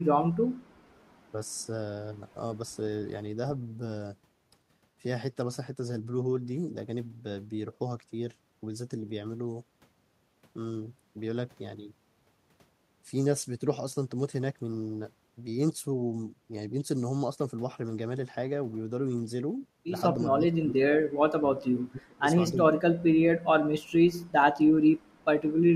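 From 20.38 to 21.06 s, the speech drops sharply. It happens again from 21.24 to 22.24 s and from 22.52 to 23.14 s. A brief dip follows at 24.73 to 24.85 s. The drops are about 30 dB, and about 35 dB at the deepest. This is speech suppressed in double talk. The likely cause is an echo canceller hearing both sides at once. It could not separate the talker from the loudspeaker echo, so it turned the talker down too.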